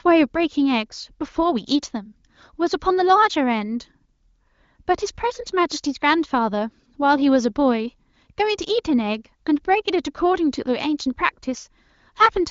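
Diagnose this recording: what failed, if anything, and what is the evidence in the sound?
Nothing in the speech points to a failure: the spectrum stops near 7 kHz, which fits an AMR wideband (HD Voice) link running at one of its upper bitrates, and no dropouts, clicks, level jumps or rough coding texture mark any stage of the chain.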